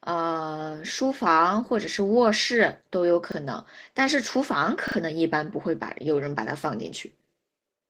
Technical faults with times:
0.00-7.89 Opus voice compression
3.32-3.36 repeated buffer
4.88-4.96 repeated buffer

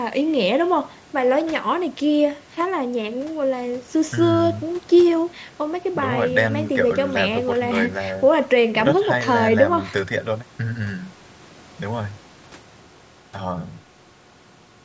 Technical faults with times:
none

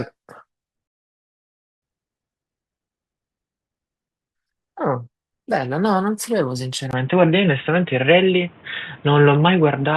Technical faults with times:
0.87-1.82 rebuffering stall
6.91-9.97 input switched to a poorer device

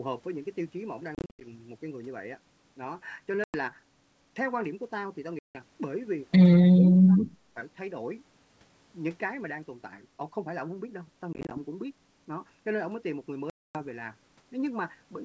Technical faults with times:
1.15-1.48 packet loss on an ADPCM call
3.44-3.56 packet loss on an ADPCM call
5.39-5.59 packet loss on an ADPCM call
6.73-7.35 speech suppressed in double talk
11.33-11.58 packet loss on an ADPCM call
13.50-13.83 packet loss on an ADPCM call

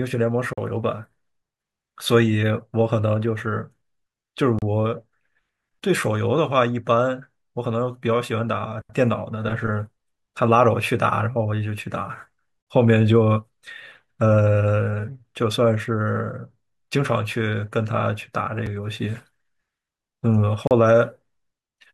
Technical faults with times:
0.53-0.58 gap between stream segments
4.59-4.62 gap between stream segments
12.62-12.67 gap between stream segments
18.66 gap between stream segments
20.67-20.71 gap between stream segments

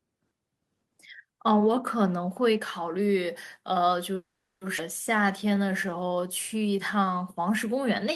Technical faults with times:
4.15-4.63 call audio freeze
4.77-4.80 skip ahead
5.17-8.10 jitter buffer slow-down

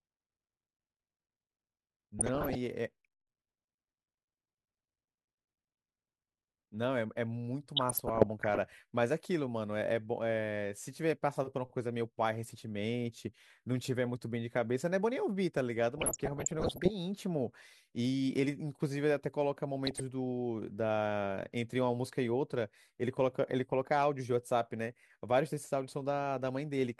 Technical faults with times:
2.19-2.58 DAB burbling
7.77-8.58 DAB burbling
15.91-16.90 DAB burbling
19.86-20.00 DAB burbling

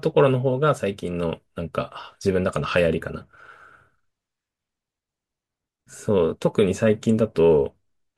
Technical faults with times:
none

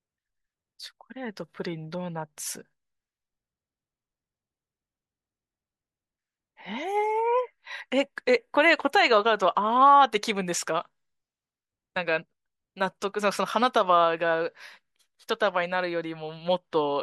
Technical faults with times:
none

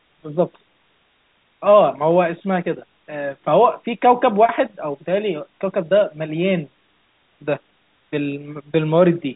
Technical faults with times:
0.00-9.35 low bit depth with dither
0.00-9.35 block size mismatch (truncated)

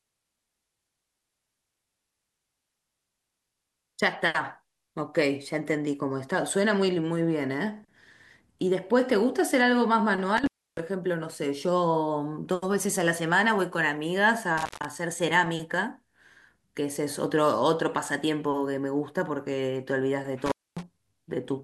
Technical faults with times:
10.37-10.80 intermittent contact
14.58-14.89 intermittent contact
20.46-20.83 intermittent contact

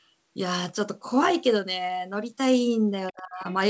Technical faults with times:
3.12-3.45 speech suppressed in double talk
3.44-3.52 other side's voice leaking through

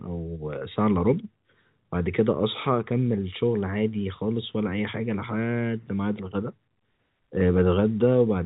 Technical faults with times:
none

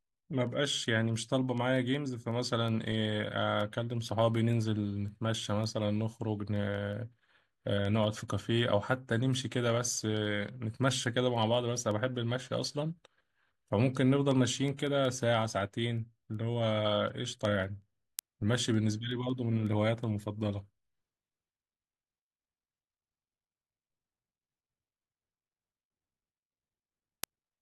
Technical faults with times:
0.10-27.61 word clock ticks

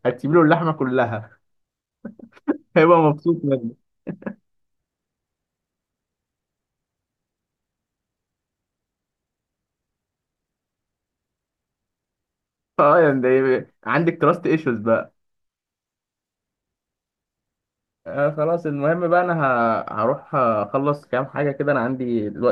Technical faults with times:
none

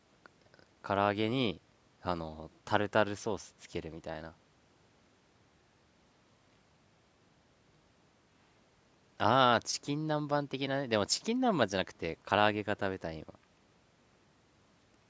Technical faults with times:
none

